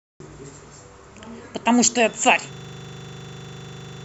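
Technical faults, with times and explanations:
2.53 to end, system hang loop: from 2.53 s the speech stops moving forward and one 40 ms slice repeats exactly, over and over, until the clip runs out. What's happening is that the system or driver froze, but the audio hardware kept cycling through the last chunk sitting in its ring buffer. A loop that short comes round 25 times a second, so instead of a stutter you get a steady, rough 25 Hz buzz, which fits a buffer of about 40 ms.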